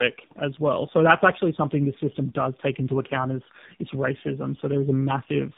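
Throughout, the speech sounds rough, muffled and warbly, with nothing above 3.7 kHz: tandem speech coding, the sound passed through two AMR-NB coders with a G.711 link between them.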